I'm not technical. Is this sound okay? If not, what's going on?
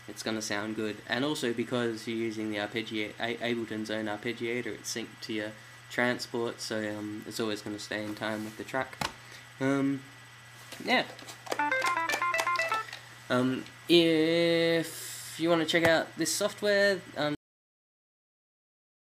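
No. At 17.35 seconds the sound stops abruptly in the middle, with no natural fade, and the rest of the clip is dead silence. This is a cut-off end: the final stretch of audio was never saved or played, so it simply ends.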